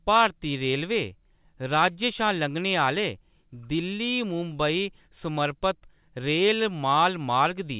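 Nothing goes wrong anywhere in this speech recording, which simply carries the usual sound of G.711 mu-law telephone coding, with the top end stopping around 4 kHz and a faint hiss that rises and falls with the level.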